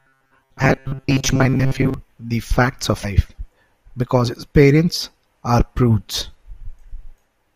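From 0.01 to 1.94 s the speech takes on a robotic sound, a rigid metallic buzz at 133 Hz, likely from repeated short buffers of about 7.5 ms filling most of that stretch. Damaged data in the compressed stream appears at 0.60 s and 3.03 s, where the decoder loses frame sync and searches for the next frame header.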